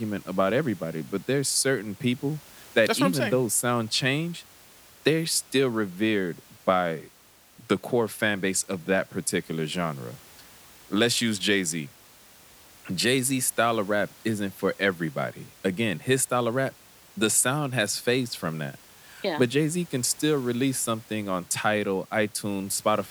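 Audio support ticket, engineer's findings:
No system fault found in the speech recording. Background room noise from the microphone's surroundings sits about 26 dB below the speech and belongs to the recording itself.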